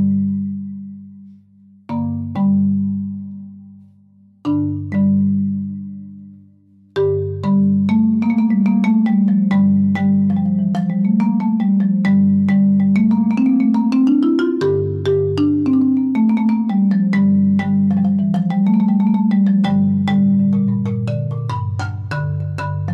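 No technical faults can be heard anywhere in the recording.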